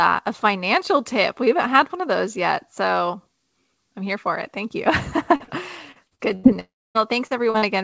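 At 5.36 s and again at 5.44 s there is short concealed packet loss. About 40 ms of speech is missing each time. The receiver continued the last sound to fill each hole. Each one is heard as a brief smear or wobble.

From 5.92 to 6.47 s comes repeated packet loss. Four gaps hit this stretch, the longest 86 ms. About a third of the span is patched. The speech turns choppy, with pieces missing.

At 6.60 s the sound blurs into a fading buzz or hiss, then goes silent for about a quarter second. It returns at 6.98 s with part of the speech gone. A long network dropout is the likely cause.

Short concealed packet loss returns at 7.27, 7.50 and 7.58 s. Each fills about 40 ms. The last two fall close together and make a double wobble. All of this sits within the call's G.722 path, which leaves nothing above 8 kHz.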